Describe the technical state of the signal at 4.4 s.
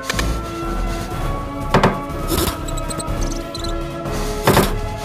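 At 4.4 s the sound is doubled: each onset arrives twice, the second copy at equal strength about 93 ms behind, heard as a distinct slap echo rather than a thickening. This is a channel delay (doubling), present throughout the clip, not just at this moment. One channel runs late by a long buffer, and a delay of that size fits a 4096-sample buffer. When the two channels are summed to mono, the late copy stands apart from the original as an audible repeat.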